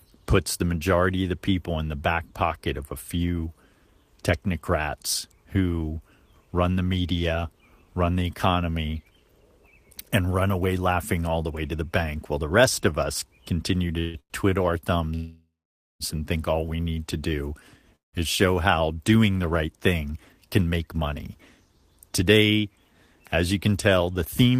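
A speech recording, interrupted by four call audio freezes at 13.99–14.17 s, 14.20–14.33 s (right after "of us continue to"), 15.15–16.03 s and 17.96–18.16 s (between "to do" and "is show how doing"). In each, the last sound is drawn out as a fading buzz and then drops to silence for about 70 ms, 510 ms and 160 ms in the last three. The talk resumes where it stopped, so nothing is lost, but the pauses of 144, 102, 850 and 173 ms are inserted. This is likely packets held up in transit until the jitter buffer ran dry. Then come two jitter buffer speed-ups, at 20.08–20.99 s just after "how doing the right", where the speech runs 14% faster, and at 21.58–21.79 s, at 15% faster. The pitch stays put but the delivery sounds hurried, because the receiver trimmed short pitch-period slices, roughly 150 ms and 40 ms in all, to shrink a backlog of buffered audio.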